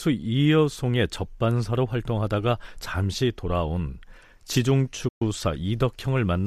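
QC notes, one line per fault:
5.08–5.22 s, digital broadcast dropout: the receiver stopped getting valid frames and muted, so the speech fades out over 8 ms into a 120 ms hole, which fits about five lost frames. Unlike packet-loss concealment, nothing fills the gap; the programme simply resumes later.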